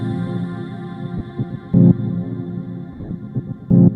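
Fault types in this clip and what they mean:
Lost LE Audio frames: Bluetooth LE Audio frames dropped, so the LC3 decoder repeated the last spectrum with randomised signs, producing a 30 ms noisy smear near 1.18 s and scattered smears across 2.93 to 3.11 s, longest run about 40 ms.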